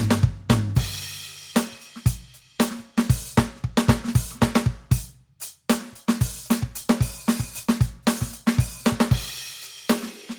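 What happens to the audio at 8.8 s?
At 8.8 s the music carries on intact, with no fault to be heard at that moment.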